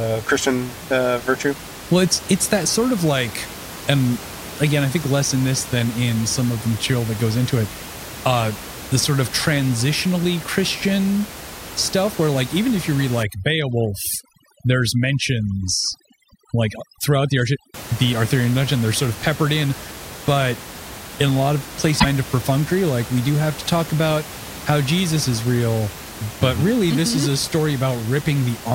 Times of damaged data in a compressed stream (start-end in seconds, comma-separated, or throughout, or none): 21.96-22.05